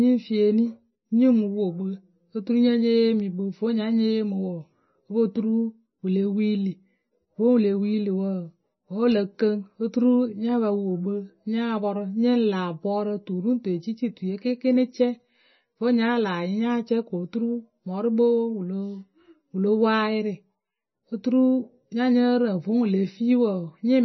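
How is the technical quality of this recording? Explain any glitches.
The recording is heavily compressed throughout its 24 seconds. The likely cause is MP3 compression at a very low bitrate, which fits something near 23 kbps. The encoder has discarded everything above about 5.9 kHz and zeroed weaker frequency lines that flicker between frames, so the speech sounds dull, watery and swirly, with chirpy sibilants and smeared consonant onsets. A simple low-pass filter would dull the treble without that warbling, frame-to-frame instability.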